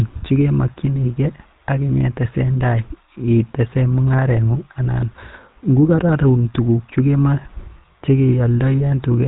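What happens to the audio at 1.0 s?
At 1.0 s the speech carries GSM full-rate codec damage, as it does for the whole clip. The codec rebuilds the voice from a vocal-tract model and a sparse pulse excitation. Nothing passes above 3.8 kHz. The result is a plainly buzzy, gravelly roughness, consistent with a roughly 13 kbps GSM link.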